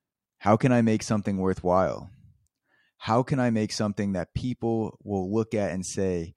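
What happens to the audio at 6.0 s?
Nothing goes wrong at 6.0 s; the speech carries on intact through that moment, with no dropout, click or distortion to be heard.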